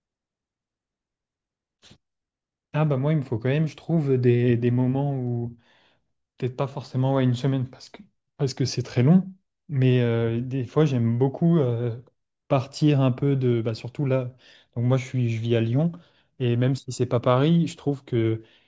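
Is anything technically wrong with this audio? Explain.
No, nothing technically wrong can be heard anywhere in this speech recording.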